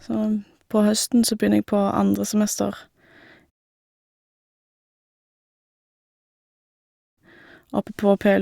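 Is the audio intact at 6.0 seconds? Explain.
Yes, the speech at 6.0 seconds is intact, with no dropout, click, distortion or other fault at that moment.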